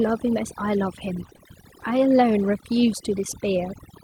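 Right from the start and all the way through, the noise reduction has been pushed too hard. It's suppressing individual frequency bands whenever they sit near its noise estimate, and the quieter parts of the speech go down with them. The background drops and breaks up into little twinkly specks. That's overdone noise removal.

At about 1.25 s, running to about 1.31 s, there's a lost packet rebuilt from error correction. Some audio went missing, but the next packet carried a low-bitrate backup copy, so the decoder played that instead and there's no gap. You hear roughly 40 ms that turns grainier and noisier than the surrounding speech, which fits a couple of lost packets being patched from their backups.

Right after that, from about 1.33 s to 1.48 s, comes a short concealed packet loss. About 20 ms never arrived in time, and the receiver filled the hole by extending the preceding sound, then blended back into the real signal. 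It comes out as a brief smear rather than a dropout, and the fill seems to stretch things by roughly ten milliseconds. Overlapping it, from about 1.37 s to 1.41 s, there's a second short concealed packet loss. Another 20 ms or so is missing and papered over the same way, adding a bit more wobble in that same stretch.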